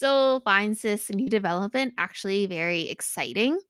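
A brief smear at 1.23 to 1.28 s, just after "finds this", and a shorter wobble at 2.22 to 2.26 s are short concealed packet loss: about 40 ms and 20 ms of the speech arrived too late, so the receiver extended the preceding sound before blending back.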